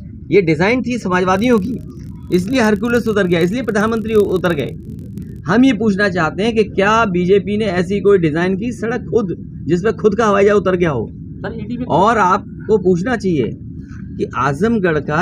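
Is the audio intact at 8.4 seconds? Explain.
Yes, the audio at 8.4 seconds is intact, with no dropout, click, distortion or other fault at that point.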